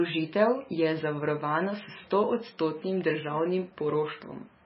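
Speech throughout carries heavy MP3 compression damage: nothing survives above 5.5 kHz, and weak frequency lines drop in and out between frames, giving a watery swirl that a plain low-pass filter wouldn't produce. The likely cause is a very low bitrate, around 17 kbps.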